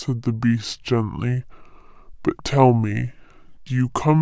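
Throughout, a wrong sample rate: playback at two-thirds the recorded rate, consistent with 24 kHz audio played at 16 kHz, makes speech slow, sluggish and seven semitones lower.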